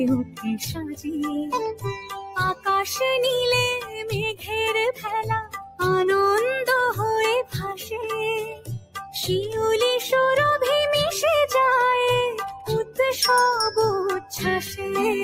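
A noise suppressor built for speech stays active across the whole clip, misreading sustained and decaying material as noise. Its gain rides up and down by around 10 dB, so the sound pumps and thins as held parts sink while onsets pass through.

The sound cut by the noise suppressor is clearest at 0.24 to 1.07 s, 1.72 to 2.67 s, 3.8 to 5.8 s, 7.43 to 9.15 s, 12.52 to 12.99 s and 14.2 to 14.8 s. In each, the suppressor clamps down on lingering tones and tails. Drops reach about 14, 15, 16, 20, 15 and 11 dB, affecting much of each span and the deepest, hollowest dip comes in the 7.43 to 9.15 s span.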